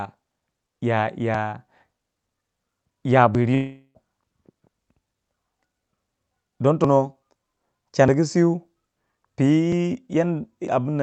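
Sudden jumps forward in the speech occur at 1.34, 3.35, 6.84, 8.08, 9.72 and 10.68 s, each cutting a short slice from the sound: roughly 20 ms at the first two and at 8.08 s, about 40 ms at 6.84 and 9.72 s, and around 70 ms at 10.68 s. There is no gap, only an abrupt splice. This is likely a dropped buffer (overrun), where the capture side failed to read its samples before the hardware overwrote them, so whole buffer lengths vanished and the surrounding audio was joined directly. Between 3.54 and 3.96 s a smeared buzzy continuation of the previous sound fades away, leaves about 60 ms of near silence, and then the speech resumes further on, with about 0.41 s of material missing. That pattern likely points to a long network dropout: no packets arrived for that stretch, and the receiver's concealment extended the last sound before giving up. The whole clip passed through an Opus call path with its bandwidth capped at 8 kHz.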